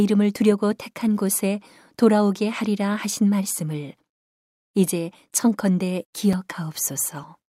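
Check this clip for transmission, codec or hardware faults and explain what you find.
One fault: a block of digital silence at 6.33 s. The program most likely failed to fill its output buffer in time, so about 5.3 ms of speech, which fits a 256-sample block, dropped to silence. The abrupt drop and return leave a tick or dip.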